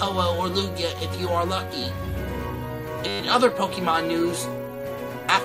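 From 3.08 to 3.2 s there is a system hang loop. The host or driver stalled while the audio hardware kept replaying the same ring buffer, so a single 10 ms slice of sound repeats exactly, about a dozen times. Because the buffer is so short, the repetition fuses into a steady buzz at 100 Hz rather than a stutter. Playback resumes from where it stopped, so essentially no audio is skipped.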